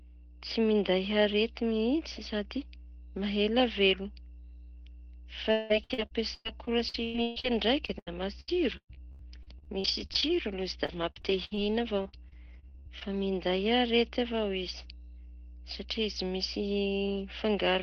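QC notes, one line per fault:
Throughout, mains hum: a ground loop or nearby transformer couples the 60 Hz power line into the signal, leaving a steady low tone about 15 dB below the speech.
5.51–10.36 s, repeated packet loss (robotic sound): packets repeatedly lost or late, some 23 holes, longest 182 ms; concealment stretches prior sound over 28% of the span, sounding choppy and robotic.
10.86–13.03 s, repeated packet loss (robotic sound): a second run, about a dozen shorter holes up to 62 ms, patched over 19% of the span, giving clipped, robotic speech with pieces missing.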